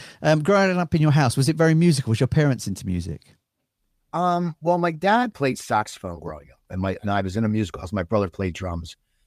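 Nothing stood out as a technical fault on listening to this speech recording.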